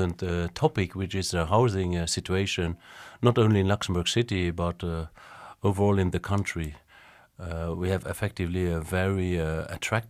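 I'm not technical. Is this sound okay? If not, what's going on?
Yes, this speech recording sounds fine, and there's nothing going wrong in it that you need to worry about.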